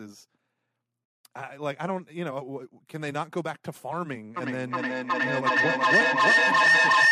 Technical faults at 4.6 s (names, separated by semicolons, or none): feedback echo between two devices